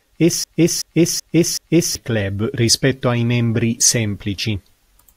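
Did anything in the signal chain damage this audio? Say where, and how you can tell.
Yes. From 0.44 to 1.95 s the speech falls into a broken-record loop: a 379 ms fragment repeats exactly, four times back to back, before the audio resumes at "club rispetto ai membri". That's likely a stalled playback or stream buffer replaying its last chunk, and whatever belonged in that gap is gone.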